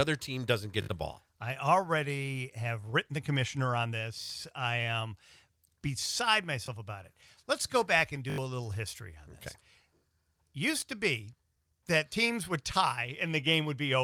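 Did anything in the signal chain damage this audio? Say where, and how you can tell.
Yes. Brief buzzy stutters at 0.82, 2.82, 4.22, 6.66, 8.3, 10.8 and 12.1 s, longest at 0.82, 4.22 and 8.3 s, point to a repeated buffer at the driver or buffer stage. New audio arrived late, so the last block replayed with hard joins, fitting a 20 ms buffer.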